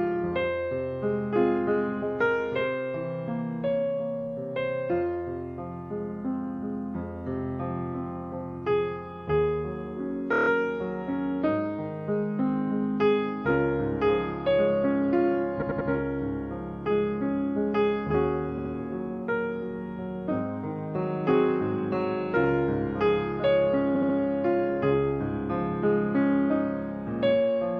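There are four bursts of repeated frames: at 10.32 to 10.48 s a 16 ms block plays six extra times, at 15.61 to 15.89 s a 92.9 ms block three times, at 18.57 to 18.71 s a 69.7 ms block twice, and at 23.94 to 24.15 s that same length three times. A run of compressed frames got resent, so each spot stutters and drags out the timing slightly.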